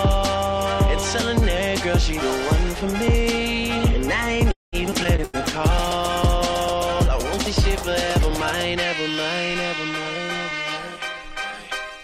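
A call audio freeze runs from 4.51 to 4.76 s. The sound stalls, the last instant is stretched into a brief tail that quickly dies away, and about 0.17 s of that pause is plain silence. Playback then resumes exactly where it stopped, so about 0.21 s of delay is inserted with nothing lost. This is likely packets held up in transit while the jitter buffer ran dry. A skip ahead follows at 4.91 to 4.95 s and another at 5.04 to 5.07 s. In each, playback leaps forward past something like 70 ms of audio with only a sliver of filler, and the two sides are butted together almost seamlessly. That fits the receiver discarding the backlog built up during the stall so it can get back toward its normal delay. Short concealed packet loss at 5.16 to 5.21 s leaves a 60 ms hole, covered by roughly 20 ms of extrapolated sound blended into the resumed signal, which comes across as a quick smear. Right after it, a burst of packet loss at 5.24 to 5.36 s loses another 60 ms, and the receiver carries the last sound on for 91 ms as a fading buzz or hiss before the audio picks up further along. 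A call bitrate drop sets in at 5.33 s and lasts until 8.61 s. The encoder falls from 96 to 27 kbps and stays at the bottom for about 3.1 s, so the sound grows coarse, watery and duller in the top end, because the encoder has far fewer bits and trims high frequencies to cope. Overlapping it, a jitter buffer slow-down from 5.71 to 9.13 s plays the audio at 98% speed, adding 58 ms by repeating single pitch periods and slivers of pauses. Timing drags slightly while pitch stays put, with occasional faint warble as the buffer rebuilds its reserve. Finally, a jitter buffer speed-up from 10.17 to 11.91 s runs at 108% and trims about 0.15 s by cutting out short pitch-period pieces over and over. Pitch holds steady but the sound feels hurried as the receiver works off excess buffered delay.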